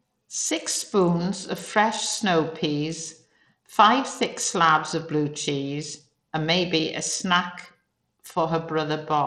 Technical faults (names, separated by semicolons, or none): Bluetooth SBC compression